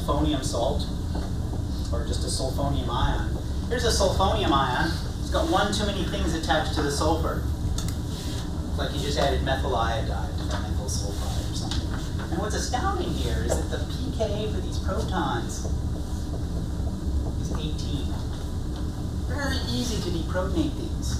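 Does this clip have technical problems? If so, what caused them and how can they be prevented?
No, nothing stood out as a technical problem on listening.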